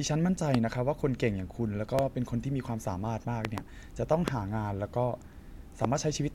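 Sharp loud pops jump well above the speech at 0.54–0.57 s, 1.99–2.01 s, 3.45–3.60 s (a double pop), 4.28–4.30 s and 5.85–5.87 s, likely from brief voltage glitches such as static or a switch.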